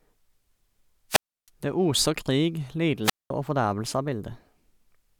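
A speech recording with two wireless microphone squelch dropouts. The first runs from 1.09 to 1.49 s, the second from 3.03 to 3.31 s. In each, the radio link from an analogue FM microphone weakens. Hiss rises briefly. Then the receiver's squelch closes and mutes the output. The holes of near silence last about 0.32 s and 0.21 s. The speech then returns as the signal recovers.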